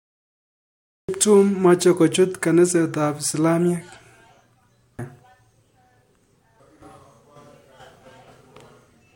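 From the start to 1.09 s the clip holds digital silence, then speech bursts in mid-sound with no attack: a cut-off start, where capture began late. The waveform shows a flat line jumping abruptly into speech; the spectrogram, a blank strip ending at a sharp vertical edge.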